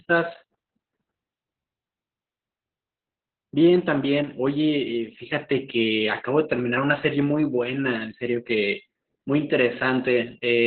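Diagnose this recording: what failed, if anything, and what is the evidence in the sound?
Opus voice compression throughout, at the codec stage: the speech stops near 4.4 kHz and sounds muffled and hoarse, which fits coarse narrowband SILK coding around 8 kbps.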